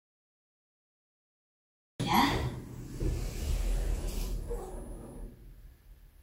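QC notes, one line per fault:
0.00–2.00 s, cut-off start: two seconds of flat digital silence, then at 2.00 s the sound snaps in already mid-event with no attack or fade-in. Capture began late, so the opening of that sound was never recorded.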